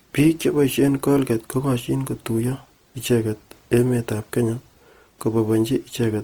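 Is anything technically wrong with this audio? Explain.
Yes. Opus compression damages the speech for the whole clip. It is likely the Opus codec in its music (CELT) mode, at a rate that fits around 24 kbps. With too few bits, the encoder keeps each band's overall energy but fills the detail by copying lower bands upward or substituting noise. The bandwidth stays full, reaching about 20.2 kHz. The damage is plainly audible as a rough, grainy, noisy texture instead of clean harmonics.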